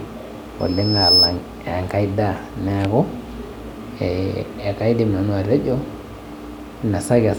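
A speech recording with a loudspeaker feedback squeal from 0.59 to 1.37 s. A tone at 5.2 kHz swells over roughly half a second until it sits around 10 dB above the speech, then stops. The microphone is picking up the loudspeaker it feeds, and at that one frequency the loop gain exceeds unity, so the tone keeps reinforcing itself. On a spectrogram it shows as a single bright horizontal line at 5.2 kHz that brightens from left to right. In the waveform, the envelope swells over that span before dropping back.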